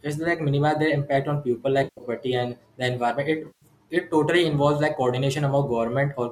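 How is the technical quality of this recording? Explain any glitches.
Two short dropouts are the main problem, sitting on a light layer of coding grit that likely comes from low-delay AAC compression.

From 1.84 to 2.03 s, and again from 3.47 to 3.65 s, you get AAC frame loss with concealment. About 150 ms of coded audio goes missing each time, nearly all of the first one in a single run. The decoder bridges the gap by reusing the last good spectrum with randomised phase, so each patch comes out smeared and phasey instead of cutting to silence.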